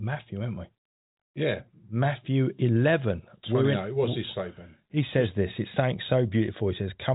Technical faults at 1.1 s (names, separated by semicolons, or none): none